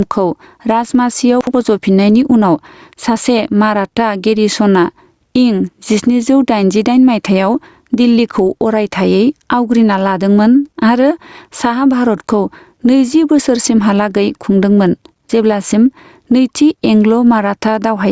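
Throughout the speech, the gain swings up and down by around 10 dB, squashing the dynamics. This is gain pumping, likely from gain set far too high with a fast limiter clamping down. From 1.41 to 1.54 s, just before "फज'फिननायनि उनाव सासे", a brief jumbled stretch is heard. These are chunks out of order: one 64 ms piece played a slot late, leaving hard joins.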